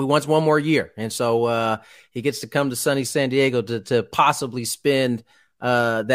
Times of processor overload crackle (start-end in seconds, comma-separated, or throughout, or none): none